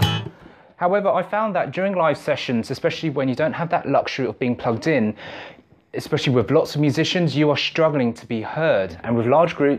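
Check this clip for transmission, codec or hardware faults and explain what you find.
No faults turn up anywhere in the clip.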